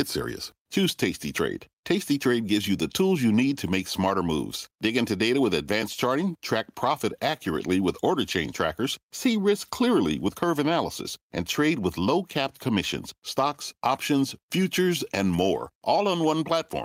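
No technical faults are audible anywhere in it.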